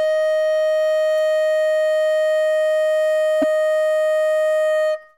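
At 3.38 to 3.44 s, damaged data in the compressed stream throws the decoder out of sync, leaving a short glitch in the music, heard as a chirp, squawk, click or brief hole.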